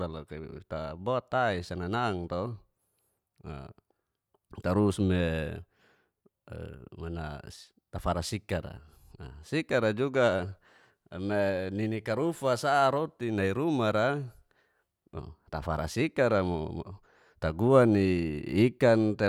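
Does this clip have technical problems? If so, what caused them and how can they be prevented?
No, this clip has no technical problems, so there is nothing to trace to a cause or prevent.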